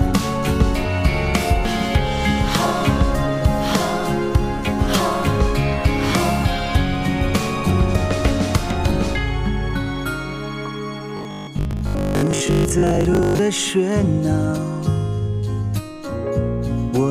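From 11.17 to 13.39 s, new audio likely arrived too seldom, so about half of this stretch is the last 20 ms of audio looped while real audio is skipped. The result is robotic sound from repeated short buffers: a rigid, metallic 50 Hz buzz.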